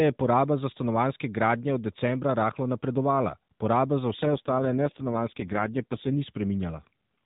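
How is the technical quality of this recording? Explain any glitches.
The speech comes through a narrowband AMR mobile path. Nothing above 4 kHz is present, and there is light codec roughness throughout. One glitch stands out.

From 4.22 to 6.25 s, right after "rahlo napredovala poraba za", there is an AMR rate drop. The codec switches to fewer bits, so the voice turns buzzy and synthetic. There is no gap, and the band stays the same. The change fits a fall from 12.2 to 4.75 kbps.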